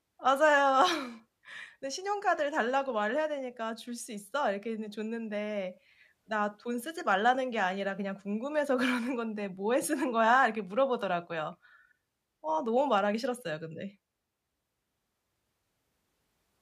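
No technical faults are audible.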